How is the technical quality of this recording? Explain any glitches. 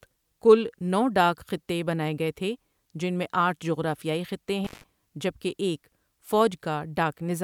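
One glitch stands out in the speech. Intermittent contact at 4.65 to 4.84 s, between "میں آٹھ جغرافیائی خطے" and "جبکہ ایک": a loose connection opens for about 150 ms, dropping the speech to faint hiss with crackle at both edges.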